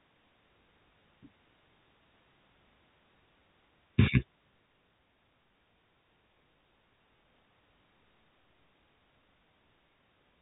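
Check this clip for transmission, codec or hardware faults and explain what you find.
Nothing stood out on listening to this speech clip beyond the expected narrow telephone bandwidth of its G.711 coding.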